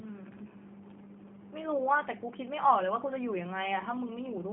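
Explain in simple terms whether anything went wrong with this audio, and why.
The speech went through a G.729 codec, a low-rate phone-call coder that rebuilds speech from a simplified model instead of sending the real waveform. From start to finish it sounds thin, plainly rough and synthetic, with nothing above about 3.6 kHz.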